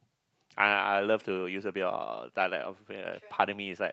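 At 0.77 to 0.79 s, one 20 ms packet was lost and rebuilt from error correction: the decoder played the lower-quality copy carried in the following packet, so there is no gap, just a brief rougher, noisier patch in speech that passes through an Opus call path band-limited at 12 kHz.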